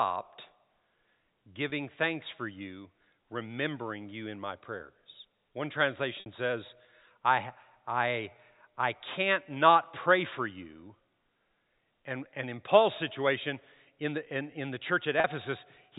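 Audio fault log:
1.70–1.72 s, 6.20–6.26 s, 15.20–15.24 s: packet loss with pitch repetition. Gaps of 20, 60 and 40 ms, consistent with whole 20 ms packets going missing, were filled by looping the last pitch period. The first sounds like a briefly held buzz. The longer two fade toward silence before the sound cross-fades back in. On a waveform, identical repeated cycles shrink in amplitude. On a spectrogram, frozen flat harmonics replace the moving ones, all below the 4 kHz ceiling of the G.711 telephone band.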